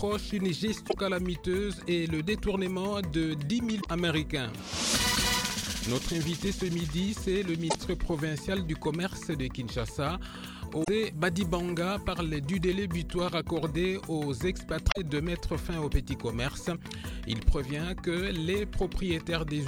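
Damaged data in a compressed stream shows up five times, as short bursts at 0.85, 3.78, 7.67, 10.80 and 14.88 s, each lasting roughly 80 to 100 ms. At each point the decoder hits corrupted bytes, misreads the affected frames and has to resynchronise on a later frame header. What separates this from a buffer dropout is that the fault lies in the encoded data itself, which the decoder misreads rather than simply running out of audio to play.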